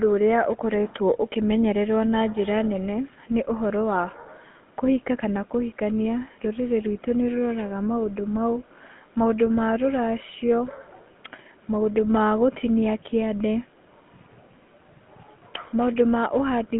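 From the first second to the last, the speech has been through a GSM full-rate codec, and it's plainly audible. The band sits roughly between 150 Hz and 3.4 kHz, so it has that thin, phone-line quality. The coder models the vocal tract and drives it with a sparse, regular pulse train instead of the real excitation, which gives every voiced stretch a buzzy, gravelly grain. The roughness fits the 13 kbps full-rate coder.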